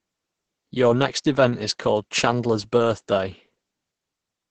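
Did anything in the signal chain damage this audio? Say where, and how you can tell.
Yes, at the codec stage: Opus voice compression throughout. The speech is muffled and hoarse, with nothing above 8.7 kHz and a coarse, robotic buzz fitting roughly 10 kbps SILK, unlike a plain filtered band edge.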